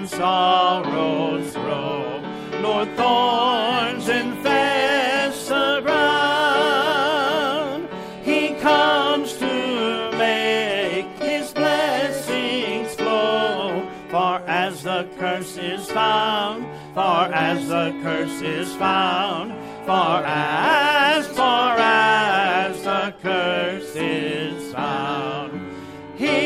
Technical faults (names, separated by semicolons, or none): GSM signalling bursts